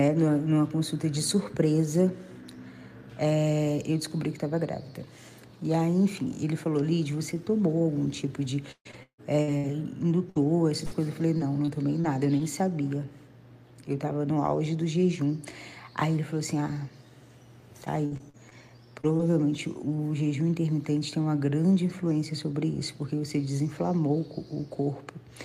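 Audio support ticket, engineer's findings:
Choppy, stuttering sound with pieces missing, 8.71–9.66 s. Five gaps, about 440 ms lost, longest 152 ms, concealment covering 45% of the stretch. Repeated packet loss (robotic sound): packets lost or late, each hole patched by extending the last sound.

Same symptom, 10.30–12.41 s. Six gaps, about 200 ms lost, longest 59 ms, 9% concealed.

Same symptom, 17.85–19.21 s. Seven gaps, about 200 ms lost, longest 58 ms, 14% concealed. Network transport or jitter buffer.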